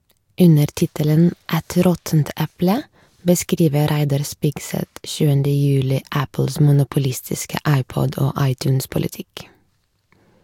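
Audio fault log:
No faults heard.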